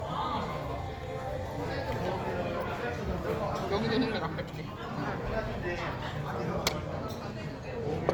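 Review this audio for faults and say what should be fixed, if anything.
Low-bitrate audio saved at a high bitrate, throughout the clip: the file is wrapped as MP3 at a generous rate, but the sound carries the thinned, smeared texture of a much leaner encode, likely a pass through a low-bitrate codec such as Opus at around 32 kbit/s before the MP3 stage. Re-encoding cannot restore the detail that first pass discarded. On a spectrogram the top edge sits at 20.2 kHz, and the blotchy, patchy fill of the first encode shows below it even though the MP3 container implies a cleaner signal. The waveform gives no clear sign of this. To prevent it, always encode from the original uncompressed source rather than from an earlier lossy copy.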